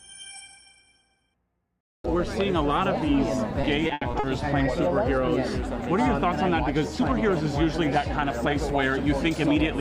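The audio turns choppy and robotic from 3.61 to 4.25 s, a clear case of repeated packet loss. Several short holes, the longest 80 ms, are patched by stretching the preceding sound. That concealment covers roughly a quarter of the stretch.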